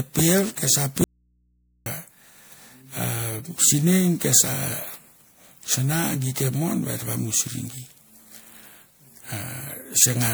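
The whole speech clip has a swirly, hollow, smeared quality, with attacks blurred, more than a single 128 kbit/s MP3 would give. That's generation loss, likely from around ten re-encodes, each pass stacking fresh quantisation noise and spectral holes.

From 1.04 to 1.86 s the speech cuts out abruptly for about 0.82 s, leaving only mains hum about 40 dB down. An audio dropout to a faint residue: the signal was likely lost upstream while the following path stayed live.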